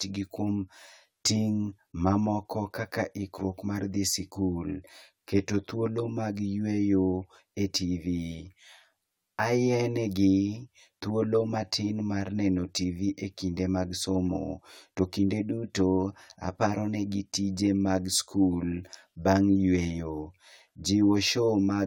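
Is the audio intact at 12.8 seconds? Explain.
No. At 12.8 seconds, as through the whole speech recording, the audio shows channel delay (comb filtering). One channel arrives around 10 ms behind the other, and when the two are folded to mono, energy common to both cancels at evenly spaced frequencies, starting near 50 Hz and repeating about every 100 Hz. The result is a row of fixed spectral notches that leaves the speech sounding hollow and phasey.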